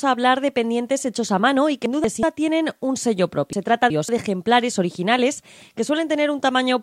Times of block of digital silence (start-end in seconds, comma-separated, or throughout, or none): none